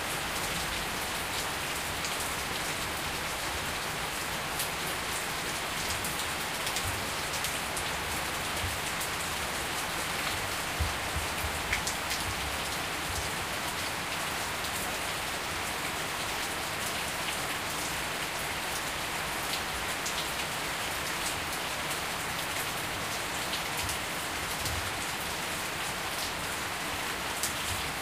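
Everyday sounds, with no technical faults to be heard.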